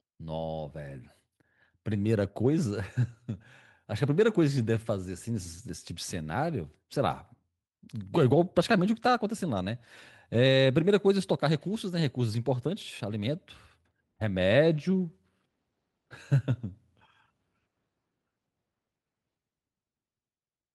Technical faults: none

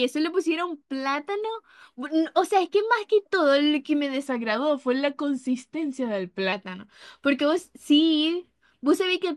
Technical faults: section at the wrong speed

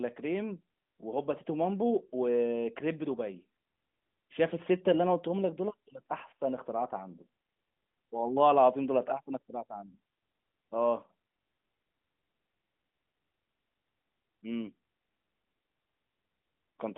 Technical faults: none

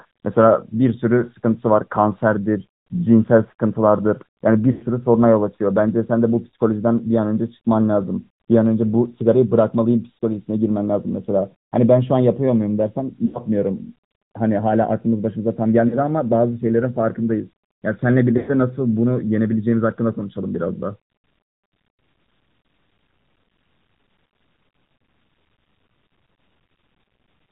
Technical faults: AMR narrowband mobile codec; lost AMR speech frames

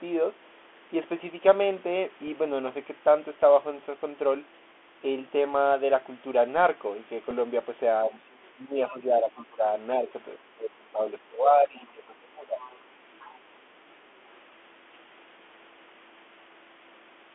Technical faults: Bluetooth CVSD headset codec; Bluetooth headset packet repeated; speech suppressed in double talk; other side's voice leaking through

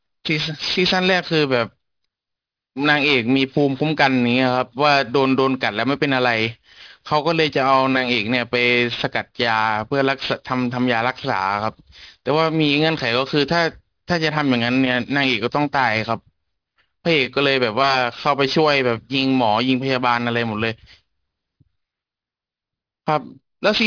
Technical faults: aliasing

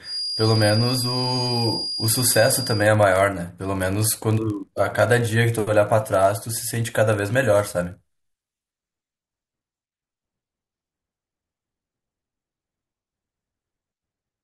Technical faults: block size mismatch (padded); feedback whistle

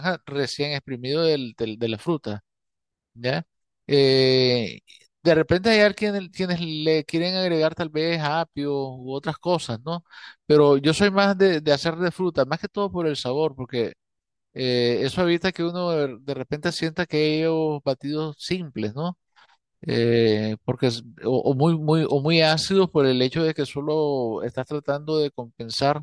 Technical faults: none

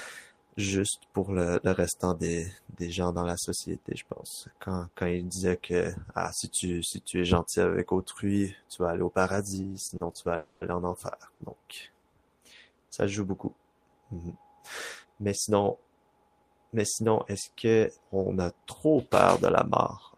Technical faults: short stall from a late packet; call audio freeze

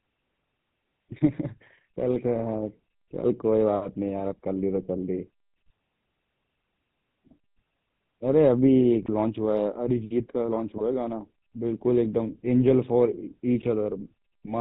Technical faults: GSM full-rate codec; GSM bit errors

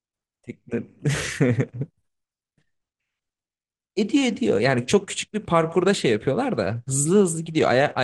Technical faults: MP2 compression; DAB burbling

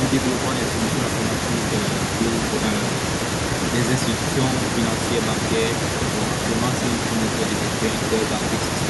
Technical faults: echo with no canceller

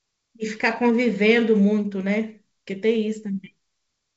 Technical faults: none

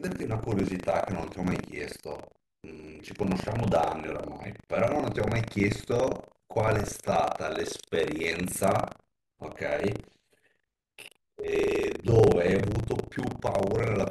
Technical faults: buffer tearing

